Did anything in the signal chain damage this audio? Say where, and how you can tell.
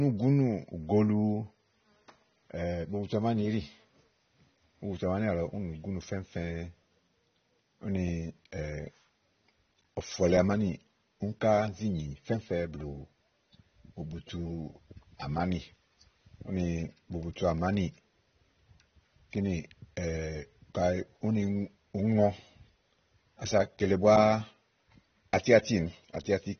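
Yes, at the codec: the whole speech clip is dull and swirly with nothing above 6.3 kHz, likely AAC compression at a low bitrate, around 24 kbps.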